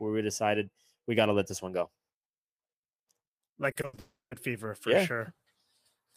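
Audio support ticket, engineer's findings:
Choppy, robotic speech from 3.71 to 3.99 s: repeated packet loss, four separate holes, longest 80 ms, about 160 ms patched in total, more than half that stretch. Receiver-side concealment keeps replaying the last frame each time, so it sounds gappy.

Straight after, 3.99 to 4.33 s, the last sound stretched and fading, then roughly 150 ms of silence before speech resumes at "fever for yeah", about 320 ms gone. Likely a long network dropout: concealment stretched the last sound, gave up, and the lost audio never came back.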